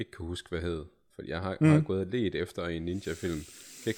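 Nothing goes wrong anywhere in this bit of speech, so there's no technical fault to walk through here.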